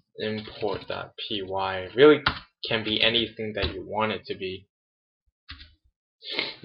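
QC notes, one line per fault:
No faults found in this clip.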